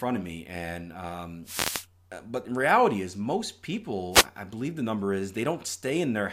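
Two wireless microphone noise hits break into the speech. The first runs from 1.44 to 1.87 s, just after "of me and um". The second, shorter one runs from 4.11 to 4.26 s, between "in reality is most" and "i believe the number". In each, the FM radio link fades as reflected signals cancel, and the receiver's hiss swells into a swish of static over the voice. That rising-and-falling noise sets it apart from a digital dropout, which cuts to silence.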